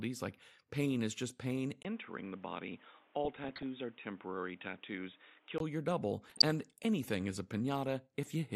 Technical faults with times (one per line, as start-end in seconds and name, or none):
0.00-8.55 MP2 compression
1.83-5.60 input switched to a poorer device
3.25-3.63 DAB burbling
6.27-6.61 DAB burbling